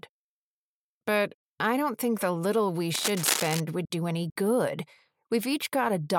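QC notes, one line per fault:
2.94–3.61 s, cable scratch noise: uneven scratchy bursts close to signal level, likely a worn connector being moved; dense broadband speckle on the spectrogram, jagged spikes in the waveform.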